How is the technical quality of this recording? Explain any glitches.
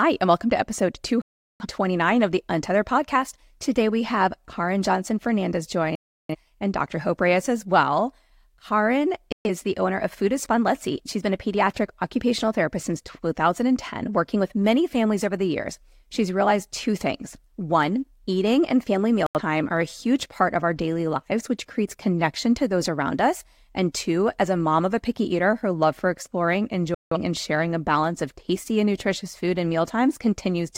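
The speech is interrupted five times by digital broadcast dropout. The receiver lost valid frames and muted until good ones returned, so the sound cuts to silence and that stretch is gone.

The holes fall at 1.22–1.65 s (between "and welcome to episode" and "of the"), 5.95–6.36 s, 9.32–9.50 s, 19.26–19.41 s (between "and family" and "are a huge part") and 26.94–27.17 s (between "her love for exploring" and "and sharing a balance"). They last from about 85 to 384 ms.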